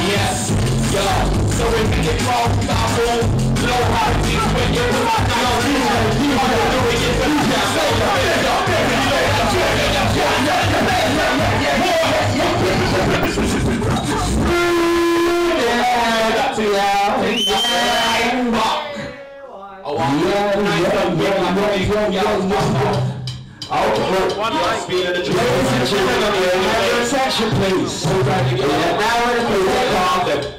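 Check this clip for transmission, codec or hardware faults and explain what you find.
One fault stands out: a burst of DAB burbling from 13.13 to 13.26 s. For about 0.12 s the sound breaks into short blips of noise. Weak reception let a small number of bit errors, around a tenth of a percent, slip past error correction into the MP2 data. Corrupted samples put short noise blips into single sub-bands, and corrupted scale factors, where they get through, make sub-bands jump in level for up to a frame; the span covers seven frames. Unlike a packet-loss dropout, nothing goes silent. Isolated frequency bands gurgle over the programme instead.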